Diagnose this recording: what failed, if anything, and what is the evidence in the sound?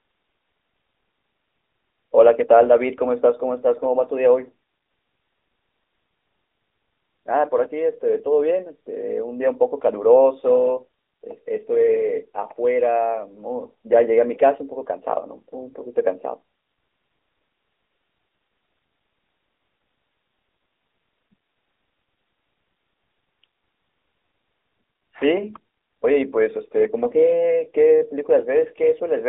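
The speech sounds boxed-in and buzzy from start to finish, with nothing above about 3.8 kHz and a thin, telephone-like band of roughly 300 Hz to 3.6 kHz. This is the AMR narrowband mobile codec: a vocal-tract model coding 8 kHz audio at a rate fitting 10.2 kbps, plainly audible throughout.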